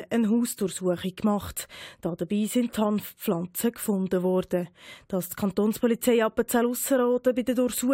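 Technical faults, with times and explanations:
No technical faults detected.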